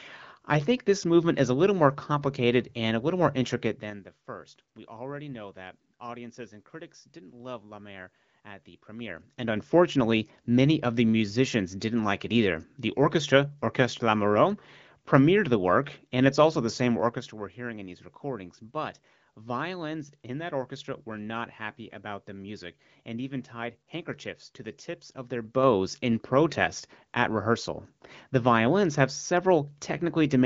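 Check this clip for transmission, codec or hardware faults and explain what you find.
One fault shows up, a burst of zipper noise just after "and it's also the".

From 16.90 to 17.37 s the level drops by roughly 10 dB in 2 dB jumps, about ten a second, with no smoothing between them. Each jump leaves a small click, so you get a quick ticking zip riding on the speech until "we're hearing in these".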